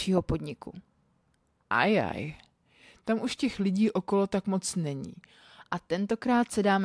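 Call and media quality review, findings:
Wrong sample rate, 1.64 to 5.61 s: speech drops low and draggy, about 1.5 semitones flat, running at 0.919 speed. Points to 24 kHz audio played out at 22 kHz with no resampling, so pitch and tempo sag together. Check the playback clock config.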